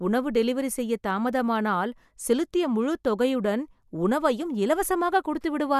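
No technical faults can be heard anywhere in this speech.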